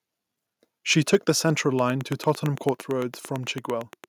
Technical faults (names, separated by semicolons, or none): microphone overload; microphone volume stepped down; train of clicks